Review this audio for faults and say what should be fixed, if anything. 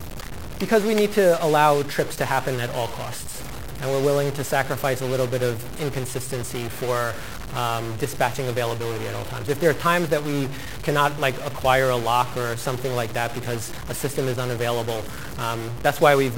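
A single data bit is likely stuck at a fixed value in the converter or its data line, and it stays stuck for the whole clip. About half the samples are pushed off by that bit's weight, a step of about -30 dBFS, in a pattern that tracks the waveform. This produces a harsh, buzzy distortion from start to finish. Because the bit also flips with the sign of small values, the quiet gaps fill with noise instead of falling silent.

Repairing or replacing the faulty line or converter, and checking every bit with a slow test ramp before recording, would prevent this stuck bit.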